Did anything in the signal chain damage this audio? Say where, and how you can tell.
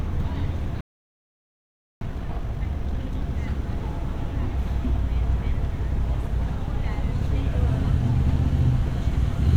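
Yes. A playback stall: the sound drops out from 0.81 to 2.01 s, about 1.2 s of silence, then resumes. Most likely the player's buffer ran dry or its thread was held up.

Then comes time-compressed catch-up from 2.01 to 3.21 s. The player clears its backlog at roughly double speed by splicing out small chunks, so the audio rushes with unchanged pitch.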